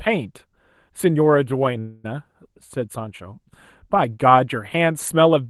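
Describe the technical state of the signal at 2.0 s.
At 2.0 s the signal is inside a call audio freeze running from 1.79 to 2.06 s. The likely cause is packets held up in transit, so the receiver's jitter buffer ran dry. To cover the gap, it extended the last sound for about 244 ms as a buzzy or hissy, fading continuation, with no drop to silence. When delivery resumed, the audio picked up where it had stopped. The result is an inserted hold and a lag of about 244 ms, with nothing lost.

Underneath, for the whole clip, there is channel delay (comb filtering). One channel trails the other by only a few samples, around a tenth of a millisecond, and the two are summed to mono. Content common to both channels cancels at evenly spaced frequencies, starting around 5 kHz. This gives the speech a phasey, hollow top end with fixed notches that don't move.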